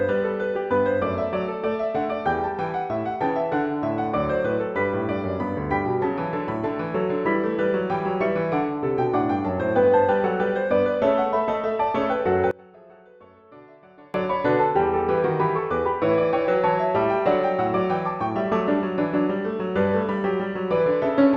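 From 12.51 to 14.14 s the sound suddenly drops away by about 26 dB, leaving a faint remnant before everything snaps back. That's the signature of one channel inverted: with one stereo side likely flipped in polarity, whatever the two channels share cancels when they're summed to mono, so the centred material mostly disappears. What's left is only the difference between the channels, which is why it sounds so faint.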